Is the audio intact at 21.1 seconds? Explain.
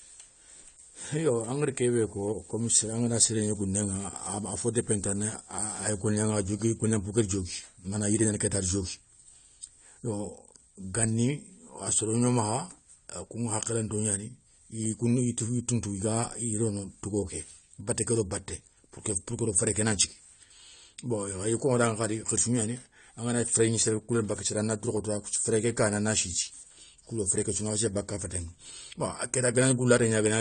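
No. At 21.1 seconds the speech carries the same damage heard across the whole clip, likely from AAC compression. Nothing is present above about 9 kHz, so the sound is dull. The codec's damage is plainly audible. AAC-LC splits each frame into frequency lines and spends scarce bits according to a hearing model. That starves the upper bands. The result is smearing and a fizzy warble on sibilants, which fits a bitrate near 32 kbps.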